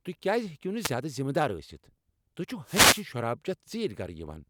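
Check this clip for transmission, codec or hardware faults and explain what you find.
Two wireless microphone noise hits, at 0.78 to 0.93 s and 2.64 to 3.06 s. In each, the FM radio link fades as reflected paths cancel, so receiver noise rises and is heard briefly as a swish of static, the second one longer and more sustained.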